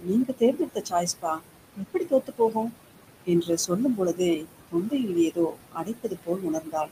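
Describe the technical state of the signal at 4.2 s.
Speech cut by the noise suppressor runs from 3.96 to 4.2 s, ending right at this moment. The suppressor mistook part of the speech for background and pulled it down with the noise, by about 14 dB at its deepest. Around a tenth of a second of sound comes out faint and swallowed. Noise suppressor artifacts are also present here, as throughout. The suppressor lowers bands it judges to be steady noise by about 21 dB frame by frame, so the residue pumps between and under the speech and can warble.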